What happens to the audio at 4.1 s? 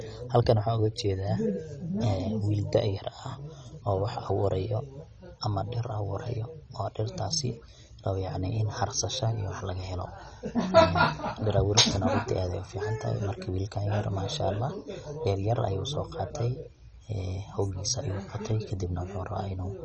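At 4.1 s, as throughout, the speech sounds dull and gurgling, with nothing above 9.9 kHz. Likely MP2 compression: starved upper sub-bands switch off, the rest coarsely quantised.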